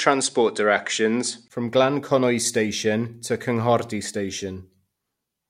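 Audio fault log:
0.0–1.5 s, input switched to a poorer device: nothing above 9.7 kHz, faint noise well below the sound, roughly 5 dB level jump and 20 ms gap at 1.5 s; likely a capture-device change.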